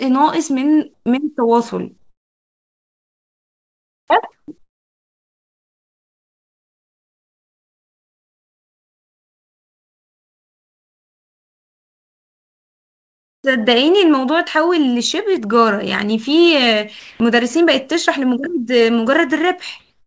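Comfort noise in place of the background fills the pauses at 0.94–1.06, 1.98–4.10, 4.32–4.48, 4.58–13.44, 17.00–17.20 and 19.80–20.06 s, likely from discontinuous transmission. The real room tone becomes steady, featureless hiss rather than a gate's silence, about 24 dB quieter across the long 8.9 s gap.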